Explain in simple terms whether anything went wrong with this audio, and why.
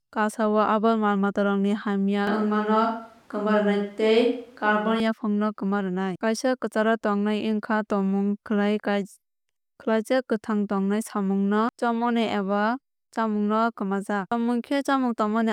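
From 2.27 to 5.00 seconds the speech suddenly turns roomy and hollow, loses some of its bass, and faint background noise comes up. Loudness stays about the same. This is a switch to a distant microphone: the close microphone was likely dropped for that stretch and replaced by one farther away, which picks up more of the room's echo and noise. At 5.00 seconds the sound snaps back just as abruptly.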